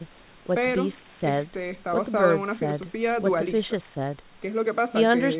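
No technical faults here.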